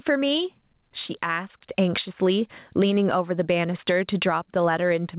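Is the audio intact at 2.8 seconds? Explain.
No. Gain pumping runs through the whole clip, including 2.8 s. The level swings by roughly 15 dB, leaving the speech squashed. The likely cause is gain set far too high, with a fast limiter clamping it down.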